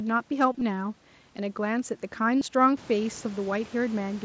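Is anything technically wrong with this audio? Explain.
Yes. Concealed Bluetooth headset packet loss at 0.52–0.61 s and 2.39–2.41 s: dropped packets were filled by repeating recent waveform, producing short buzzy held tones with a slight warble on recovery.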